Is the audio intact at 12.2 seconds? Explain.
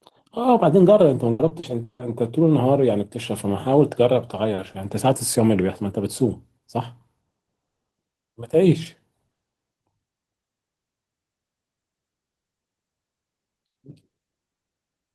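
Yes, at 12.2 seconds the speech plays through cleanly, with no dropout, click, distortion or other fault at that moment.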